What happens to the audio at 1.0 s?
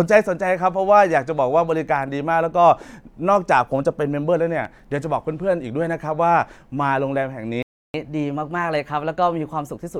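Nothing goes wrong at 1.0 s; the speech continues intact through that moment with no dropout, click or distortion.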